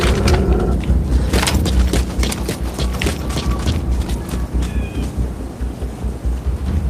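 Nothing goes wrong in this audio; there's no dropout, glitch or distortion anywhere to point to.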